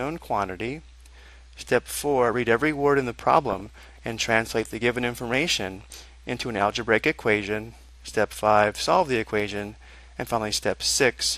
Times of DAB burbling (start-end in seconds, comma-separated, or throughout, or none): 3.50-3.99, 5.81-6.08